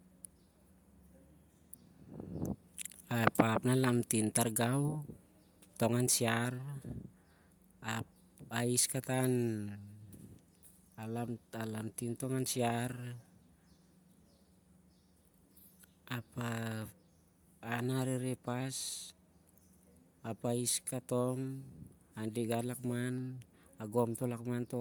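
Across the whole speech recording there is plainly audible codec damage that sounds like Bluetooth LC3 compression, most likely from an LE Audio link. Consonants and the upper voice carry a breathy, grainy sheen where the encoder has replaced detail with shaped noise, a character that points to a bitrate near 48 kbps and 10 ms frames. The band still reaches about 20.1 kHz, so the fault is the noisy texture of the highs, not a dull, low-passed sound.

At 3.11, 16.82 and 23.18 s there are single sharp clicks, each a thin vertical line across the spectrum. These are dropped samples, likely a fraction of a millisecond lost in the stream, so the waveform jumps abruptly to a later value. Unlike a dropout or gap, no sound is missing and nothing goes silent. Each is only an isolated tick, unrelated to the steady grain of the codec.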